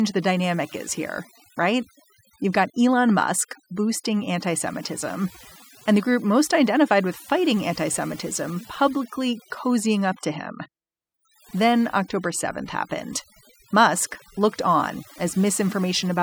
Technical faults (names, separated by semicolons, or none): overdone noise removal